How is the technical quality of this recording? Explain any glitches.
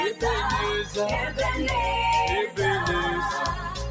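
The recording is marred by a noise suppressor meant for voice. Its level keeps pumping and thinning, and the call's processing leaves nothing above 8 kHz.

Throughout, there is a noise suppressor applied to music or sounds. Held tones and tails dip by roughly 5 dB because the suppressor mistakes steady content for noise and turns it down.

From 3.56 s to the end, the sound is cut by the noise suppressor. The sound sinks by up to about 5 dB over roughly 300 ms as the suppressor reads it as noise.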